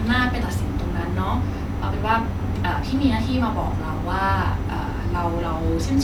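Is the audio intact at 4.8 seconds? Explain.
Yes, the speech at 4.8 seconds comes through intact, with no dropout, click, distortion or other fault at that moment.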